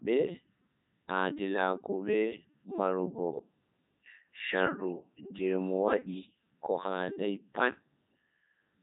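From start to finish the speech passes through a Codec 2 vocoder, heavily damaged. Only pitch, voicing, energy and spectral envelope survive, rebuilt from sine waves, giving a robotic, buzzy voice consistent with the 3.2 kbit/s mode, with nothing above 3.8 kHz.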